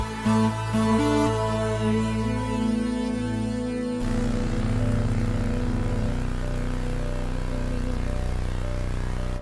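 From 2.04 to 8.52 s, a 50 Hz buzz rides the sound: the resampler restarted on every block, leaving a small error at each 20 ms edge.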